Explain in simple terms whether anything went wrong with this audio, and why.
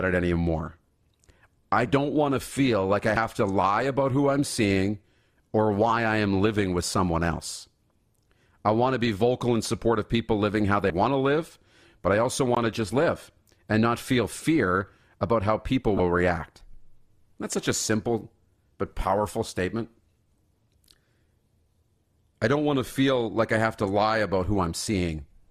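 Damaged data in a compressed stream shows up three times in this speech clip, at about 3.14 to 3.17 s, 10.87 to 10.90 s and 15.96 to 16.00 s. Each lasts only about 30 milliseconds. At those spots, part of the compressed file was spoiled, so the decoder briefly misread it and had to hunt for the next clean starting point. Each one comes through as a short chirp or blip.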